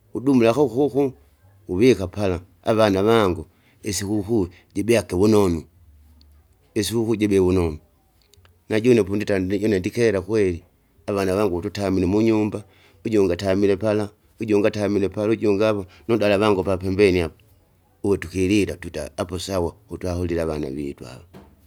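No technical faults are audible.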